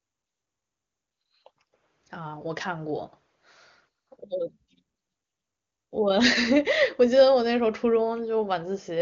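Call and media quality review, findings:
No faults found; the speech carries the wideband sound of the AMR wideband (HD Voice) codec, with content stopping around 7.2 kHz and at most faint coding roughness, which fits one of the codec's higher bitrates.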